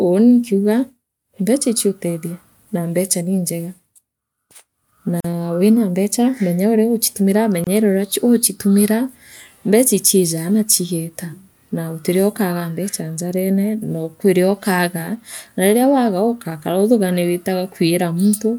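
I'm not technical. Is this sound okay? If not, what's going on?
No. A gap at a join of encoded pieces appears at 5.20 s (about 41 ms) and 7.64 s (about 26 ms). The speech was encoded in separate pieces and joined untrimmed, so each join keeps a short silence before the speech resumes.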